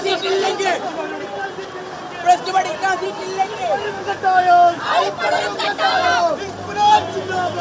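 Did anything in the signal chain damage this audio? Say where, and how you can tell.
No, nothing in this audio stood out on listening as damage introduced anywhere along the signal chain.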